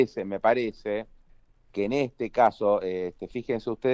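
No technical fault can be heard anywhere in this clip. There is no moment in the audio that calls for a timestamp or a closer look.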